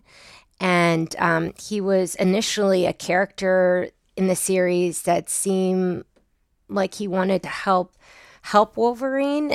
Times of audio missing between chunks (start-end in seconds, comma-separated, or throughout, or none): 1.49, 4.46, 7.44